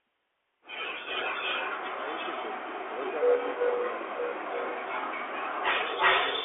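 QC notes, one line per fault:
throughout Bluetooth CVSD headset codec: The sound is boxed into a narrow telephone band, roughly 300 Hz to 3.4 kHz, with nothing above 3.6 kHz, so it is muffled and thin. The damage is plainly audible: s sounds come out scratchy, loud bright passages distort, and a granular hiss sits underneath. This fits a 64 kbit/s CVSD stream, whose one-bit up-or-down steps cannot follow fast, loud changes in the waveform and leave grainy noise behind.
1.02–6.44 s echo leak: From 1.02 s to the end, a delayed copy of the speech trails it by about 341 ms, at roughly 5 dB louder than the direct speech. The likely cause is a far end playing the call on a loudspeaker, where the echo canceller failed to remove what its microphone picked up. That leftover signal was sent back down the line.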